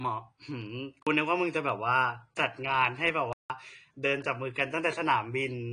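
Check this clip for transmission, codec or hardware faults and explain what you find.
Two things stand out: codec damage across the whole speech clip and two dropouts.

The AAC compression runs throughout and is clearly audible. Nothing comes through above 10 kHz, so the speech sounds dull. That's likely AAC-LC at a low bitrate, around 40 kbps, where the hearing model drops the top band and coarsens what remains.

There are two blocks of digital silence, one from 1.02 to 1.07 s (about 43 ms) and one from 3.33 to 3.50 s (about 171 ms). The sound cuts out and back with no fade, leaving short holes, and the second one is noticeably longer. Their lengths fit buffers of 2048 and 8192 samples. The output was either not filled in time or was fed invalid numbers and zeroed.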